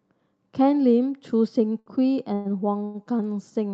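At 1.79 s to 1.89 s there is a short stall from a late packet. A packet arrived after it was due, the jitter buffer ran dry, and the receiver held the last sound for about 68 ms until it turned up. Playback then resumed at the same point, so nothing is lost and everything after is shifted about 68 ms later. It is heard as one sound dragged out with a faint buzz or dip. Unlike a dropout, it leaves no hole or skipped syllable.

From 2.34 s to 2.48 s comes a call audio freeze. The sound stops moving forward and is carried on for about 109 ms as a buzz or hiss that fades without reaching silence. Speech then picks up exactly where it stopped. The likely cause is packets held up in transit, emptying the jitter buffer. Compared with the brief stalls, the fill is longer and decays audibly, so it sounds like the call hanging rather than a syllable stretching.

A second short stall from a late packet follows at 2.85 s to 2.97 s. 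The held sound lasts about 92 ms with the same slight buzz or dip and nothing missing afterwards. Throughout, the audio carries the usual coding noise and the top end rolled off near 12 kHz, which fits Opus at around 48 kbps.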